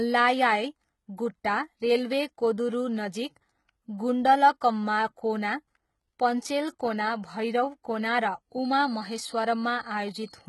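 HE-AAC compression runs through the whole speech clip. The sound is heavily damaged and nothing reaches above 11.8 kHz. The top band has a synthetic brightness, and the s sounds come out gritty and lispy, as if the treble were copied up from lower bands rather than carried through. That points to a likely low-bitrate HE-AAC encode, around 16 kbps, where spectral band replication rebuilds the upper range from a rough envelope and its harmonics no longer line up with those below.

A feedback whistle enters at 8.49 s and lasts to the end, near 10.49 s. It is a thin, steady tone at 4.4 kHz, sitting roughly 25 dB under the speech and swelling and fading slowly in level without building up. Its cause is likely a loudspeaker-to-microphone loop held just at the edge of feedback, so that one frequency keeps ringing on its own.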